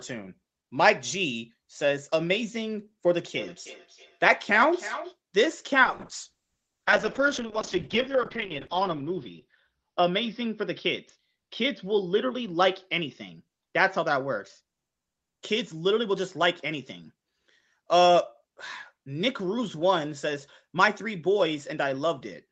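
From 3.17 s to 5.18 s, there is a feedback echo between two devices. A second device in the same room was playing back what the first device's microphone had sent, and that microphone picked it up again. Each device's echo canceller removes only its own playback, so the loop went uncorrected. The speech comes back at a steady interval of roughly 300 ms, thinner and more metallic, peaking about 12 dB below the direct speech.

From 5.85 s to 17.08 s, a call bitrate drop follows. The call's bandwidth estimate fell, and the Opus encoder was pushed to spend far fewer bits. The degradation fits a fall from about 32 kbps to around 7 kbps, with the lowest point held for 2.94 s. The upper limit also falls from 8 kHz to 6 kHz, beneath the 8 kHz ceiling the call path already imposes. Coarser coding makes the speech rough and watery, and the lost top end makes it muffled until the bitrate recovers.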